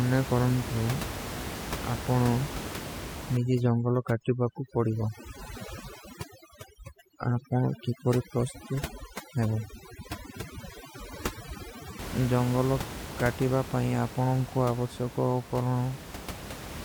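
Overdone noise removal runs from 3.37 to 11.99 s in this speech clip, ending just before "ଜଂଗଲୋ କାଟିବା ପାଇଂ ଆପନୋଂ". An overly aggressive noise reducer mutes frequency bands near its noise estimate, so the background drops and breaks up into twinkling, warbling specks. The room noise it is fighting sits about 11 dB below the speech.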